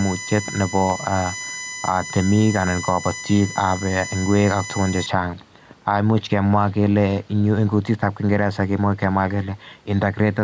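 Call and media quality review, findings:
Gain pumping, whole clip. Level swing of around 5 dB. Dynamics squashed. Likely cause: microphone gain set far too high, with a fast limiter or compressor clamping every peak.

USB whine, 0.00 to 5.06 s. Steady fixed-pitch tone at 1 kHz, strongest harmonic at 2 kHz, roughly 15 dB below the speech. Points to USB bus current in 1 ms frames leaking into the microphone path through power or ground. Stops at 5.06 s.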